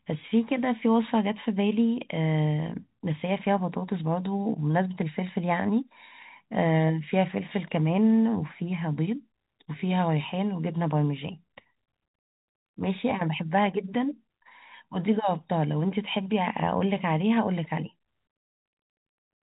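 The speech has no technical faults: it carries the narrow band of G.711 telephone coding, with nothing above 4 kHz and at most a faint quantisation noise that rises and falls with the signal level.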